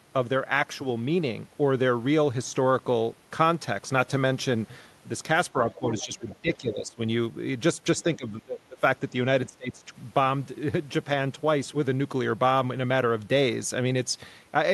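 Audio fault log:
5.75–5.85, 6.03–7.01, 8.02–8.83 and 9.47–9.96 s: speech suppressed in double talk. The talker's level dips by roughly 10 to 20 dB, deepest in the last two stretches. This is likely the echo canceller being unable to separate the talker from loudspeaker echo while both sides spoke, so it turned both down.
5.99–6.06, 6.30–6.35 and 7.99–8.17 s: other side's voice leaking through. Brief, faint scraps of a second voice, some 20 to 30 dB below the talker, surface in and around the suppressed stretches. These are likely remnants of loudspeaker playback that the echo canceller failed to remove from the microphone.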